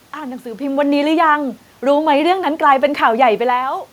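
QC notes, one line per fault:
No faults found.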